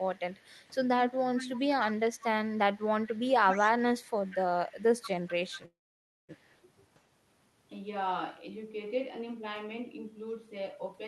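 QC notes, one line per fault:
0.00 to 6.56 s, echo leak: a delayed copy of the speech trails it by about 188 ms at roughly 15 dB below, likely from a loudspeaker whose echo canceller let part of the signal return. Unlike reverb, it is a discrete repeat rather than a smooth decay.
4.30 to 4.36 s, speech suppressed in double talk: the speech dips by about 5 dB for roughly 70 ms, likely because the canceller mistook overlapping talk for echo and turned both down. The level only sags briefly; nothing is lost outright, unlike a dropout.
5.65 to 6.31 s, call audio freeze: the last sound is stretched into a short fading buzz or hiss, then about 0.56 s of silence, likely the jitter buffer running empty while packets were delayed. Speech resumes where it stopped, so a 0.63 s gap is inserted with nothing missing, unlike packet loss.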